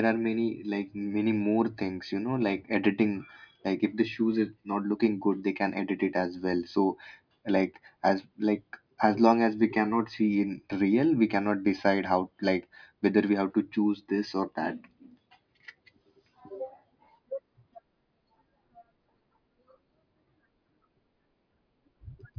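No technical faults are audible.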